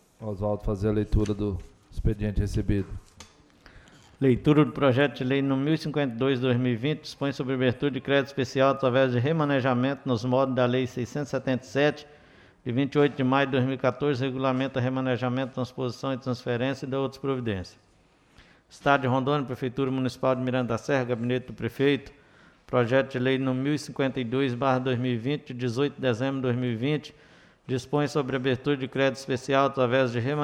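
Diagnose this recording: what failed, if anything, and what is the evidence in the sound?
Nothing in the chain from capture to playback has failed, and the signal holds together continuously with no audible sign of any stage misbehaving.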